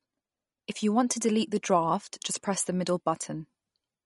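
Throughout, the speech sounds plainly watery and swirly, with nothing above 11.2 kHz: likely MP3 compression at a low bitrate, around 44 kbps.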